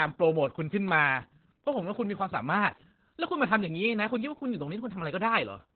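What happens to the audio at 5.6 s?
At 5.6 s the speech is still under Opus voice compression, which runs through the whole clip. The SILK linear-prediction coder limits the band to 4 kHz and coarsely codes the excitation, which fits a rate near 8 kbps. The result is heavily muffled, hoarse, slightly robotic speech.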